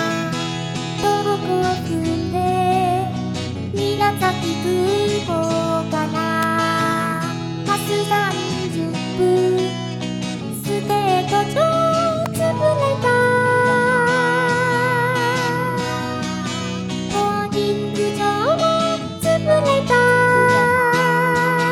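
A sharp, dry snap cuts across the sound at 6.43 s, and a second, even tighter one follows at 12.26 s. Both peak around -5 dBFS and sit on top of the audio rather than interrupting it. This is an electrical switching spike, likely from a nearby switch, motor or static discharge arcing briefly and coupling into the audio line as a momentary burst.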